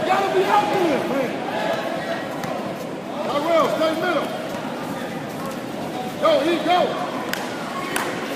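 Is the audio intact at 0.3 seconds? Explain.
Yes, at 0.3 seconds the audio is intact, with no dropout, click, distortion or other fault at that moment.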